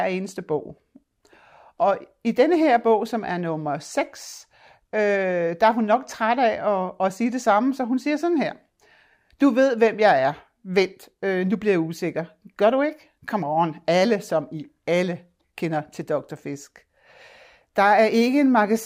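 No technical faults are audible anywhere in the recording.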